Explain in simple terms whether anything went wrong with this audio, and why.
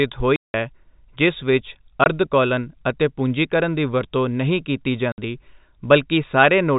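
Yes, there's a problem: packet loss filled with silence. The speech drops out completely three times: from 0.36 to 0.54 s, a gap of about 180 ms; at 2.04 s for about 20 ms; and from 5.12 to 5.18 s for about 60 ms. Each hole is a multiple of 20 ms, which fits chunks of sound getting lost on the network while the receiver just played nothing in their place. The telephone-style coding itself, with its narrow sound that stops around 4 kHz, is working as designed.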